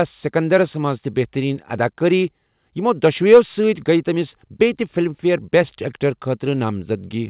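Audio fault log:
No faults to log.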